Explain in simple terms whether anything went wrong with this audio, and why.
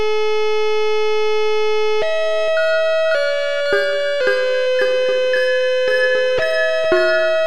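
Wrong sample rate, throughout the clip: everything runs about 1.38 times too fast and sounds 5.55 semitones higher, which fits audio recorded at 32 kHz being played back at 44.1 kHz.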